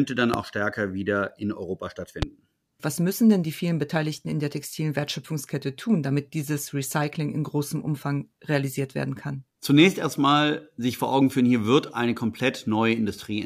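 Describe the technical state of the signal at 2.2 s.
A single loud pop occurs from 2.22 to 2.25 s, peaking roughly 15 dB above the speech, which continues beneath it. The sharp transient likely comes from a sudden voltage step, such as a plug, switch or static discharge, entering the signal chain.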